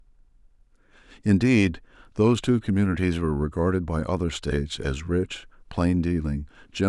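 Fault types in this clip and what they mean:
No fault types are present in this clip.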